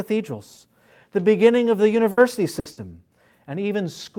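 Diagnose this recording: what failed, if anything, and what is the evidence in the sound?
Bursts of packet loss on the network at 2.11, 2.59 and 2.71 s: the receiver holds the last sound for about 60 ms, fading it, then skips ahead.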